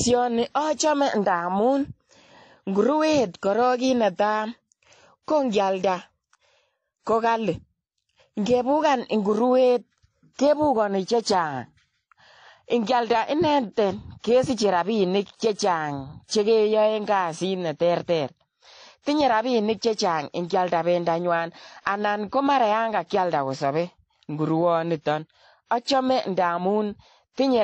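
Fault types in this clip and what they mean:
Transcoding between lossy codecs: The speech stops at 9.6 kHz. Two sets of codec artefacts are heard together. Likely cause: a lossy encoding re-encoded as low-bitrate AAC.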